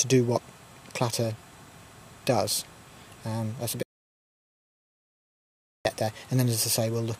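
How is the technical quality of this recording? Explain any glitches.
The recording has one clear glitch. An audio dropout to silence runs from 3.83 to 5.85 s, so about 2.02 s of sound is lost. The input was likely lost for that stretch, through a disconnected device, a failed link or a stray mute, while recording carried on and wrote silence in its place. The sound cuts off mid-flow, the gap is fully silent with no room tone, and it resumes abruptly, so whatever occurred during those two seconds is gone.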